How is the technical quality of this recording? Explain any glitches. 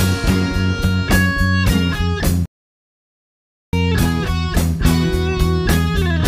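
The recording has one clear glitch. From 2.46 to 3.73 s a playback stall, likely the player starving for data, cuts the sound mid-flow, leaving a flat waveform and a blank spectrogram band.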